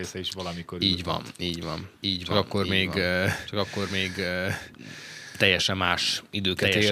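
Speech carries a doubled audio track throughout: a second, full-band copy trails the original by about one second, roughly 5 dB quieter. Unlike an acoustic echo or reverb, the repeat has no decay, no room colouring and no further repeats; it is simply the same signal laid in again at a fixed offset. Its most likely cause is the audio being captured a second time through a slower path.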